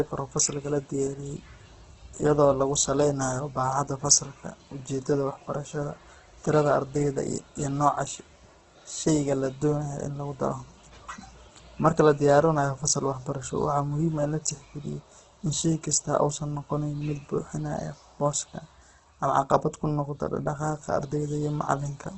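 From start to finish the speech sounds rough and grainy, with a noisy, gritty texture in voiced sounds and nothing above about 8.4 kHz. This is likely heavy Opus compression in its music mode: starved of bits, the encoder keeps each band's energy but fills the detail with folded or noise-like content, trading clean tone for graininess. The narrowed bandwidth and the depth of the damage fit a bitrate of around 12 kbps.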